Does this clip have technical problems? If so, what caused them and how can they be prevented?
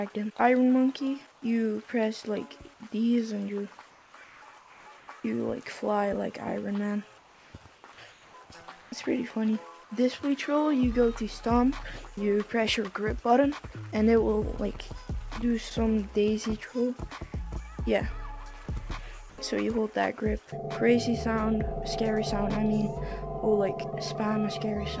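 Yes. Comfort noise replaces the background at 1.32–1.42 s, 3.90–5.08 s, 7.18–7.84 s, 8.12–8.34 s, 8.82–8.92 s and 19.30–19.38 s. In each gap the real ambience gives way to a flat, featureless hiss, about 3 to 4 dB quieter at 1.32 and 8.12 s, level at 8.82 s and about 3 dB louder at 19.30 s. The likely cause is discontinuous transmission: the sender's detector judged these moments silent, stopped sending audio, and the receiver synthesised shaped noise instead. The call path itself, with nothing above 8 kHz, fits G.722 at 64 kbps. Disabling DTX on the sending side, or raising the detector's sensitivity so quiet background still counts as signal, would prevent these substitutions.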